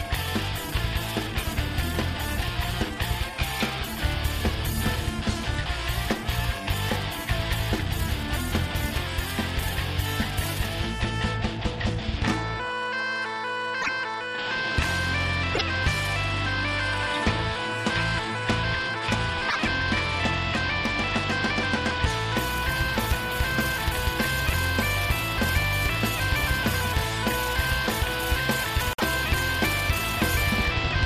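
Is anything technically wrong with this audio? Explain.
Yes. A broken MP3 bit reservoir is the likely cause of four brief garbled skips at 13.81–13.89, 15.53–15.62, 19.48–19.56 and 28.93–29.03 s. Each spans about three to four 26.1 ms frames whose borrowed data points into the wrong frame.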